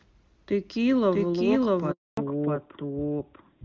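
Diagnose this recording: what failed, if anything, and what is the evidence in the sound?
Call processing or storage: a doubled audio track runs through the whole recording. A second copy of the speech, at about the same level as the original, trails it by roughly 0.7 s, so every syllable is answered by a full-band echo. That echo has no decay and no room colour. A room reflection would fade and take on the room's tone, so this points to a clean duplicate. The likely cause is the audio being captured a second time through a slower path, or an edit that holds two out-of-step copies.

Network: a handover gap from 1.91 to 2.17 s. The phone switched the call between networks, and for about 260 ms no speech frames arrived. The speech fades out within a few tens of milliseconds and stays silent until the new link comes up. Nothing spoken in that window is recovered, because the frames were never delivered.

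Codec: a fallback to narrowband from 2.17 s to the end. Up to the handover, the speech carries HD Voice bandwidth consistent with AMR-WB at a high rate such as 23.85 kbit/s, with only faint codec damage. After the switch, nothing above 4 kHz remains. Sibilants and breath lose their air, and the speech turns duller and rougher. This fits the new link negotiating an older narrowband codec, most likely AMR-NB around 12.2 kbit/s.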